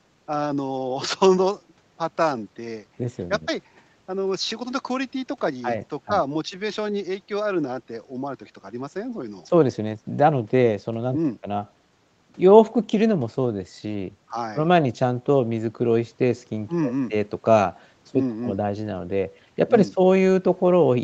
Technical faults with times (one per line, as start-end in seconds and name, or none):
none